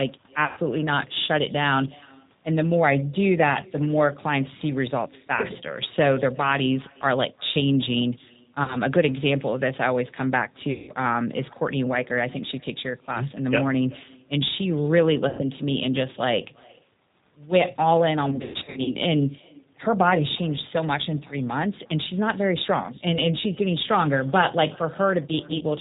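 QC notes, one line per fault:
throughout: echo with no canceller. A faint, thinner copy of the speech trails it by roughly 0.4 s, about 28 dB down, because the far end's loudspeaker feeds its microphone with nothing removing it. A spectrogram shows weak ghost syllables offset behind each phrase.
throughout: G.729 codec. Plainly audible coding damage: speech sounds rough and slightly synthetic at 8 kbit/s, consistent with the G.729A variant, since it is rebuilt from a vocal tract filter and pitch predictor. A spectrogram shows nothing above 4 kHz and smeared, blocky harmonics.
0.47–0.60, 8.64–8.78, 10.72–10.92, 15.29–15.42, 18.30–18.97, 25.47–25.65: VoIP packet loss concealed by the speech codec. Missing audio of 100, 40, 160, 100, 380 and 60 ms respectively was replaced by the decoder extrapolating the last pitch and filter, giving buzzy stretched tones that fade. The 18.30 and 25.47 events are scattered gaps, with the longest runs 120 and 40 ms. 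On a spectrogram, flat repeated harmonics appear with decaying energy. The speech stays weak briefly after each event.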